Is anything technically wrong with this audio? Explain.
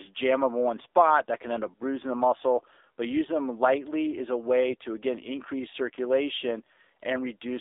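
Yes. Throughout, the speech sounds buzzy and synthetic, confined to roughly 300 Hz to 3.7 kHz. This is AMR narrowband mobile codec damage, and the plainly audible artefacts fit a low 7.4 kbps mode.

From 4.68 to 4.76 s, between "them lightly is a" and "to again increase", the speech turns briefly hoarse and gargly while keeping pitch and level. These are AMR bit errors: a couple of percent of the weakly protected bits were flipped across a few frames, misplacing excitation pulses.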